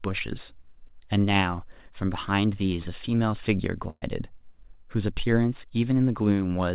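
At 3.9 s, a burst of packet loss removes about 120 ms of speech. The receiver fills the hole by stretching the last sound for about 116 ms, fading it as it goes, then about 20 ms of silence before the audio picks up at 4.04 s with the skipped stretch simply gone. On a waveform this appears as a smooth, decaying repetition ending in a flat dropout. On a spectrogram, the held sound smears into a brief blank column, all below the 4 kHz ceiling of the narrowband call path.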